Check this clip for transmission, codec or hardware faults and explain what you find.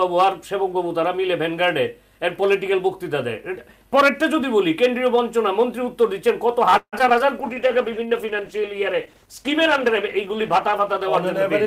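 Two transmission faults are audible, both in the second half of the clip.

From 6.77 to 7.22 s there is repeated packet loss, heard as choppy sound with pieces missing. Four gaps fall within this half-second stretch, the longest about 152 ms. The receiver fills each hole by extending the preceding sound, covering roughly 182 ms, so around 41% of the span is concealed rather than real. Another 60 ms is simply missing, leaving audible breaks between the smeared patches.

From 7.40 to 11.14 s a call bitrate drop follows. The sound goes from a rate consistent with 64 kbps down to one near 13 kbps, and it stays at that floor for about 3.6 s. With so few bits the encoder quantises coarsely and discards upper frequencies, so the audio turns muffled and watery, losing crispness until the end of the affected stretch.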